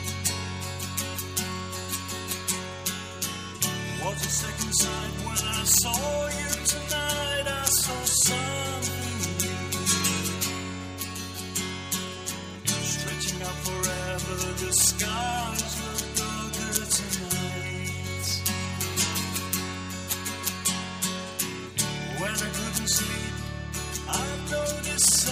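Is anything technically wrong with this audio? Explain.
No, nothing technically wrong turns up on listening: level, timing and continuity all hold steady throughout.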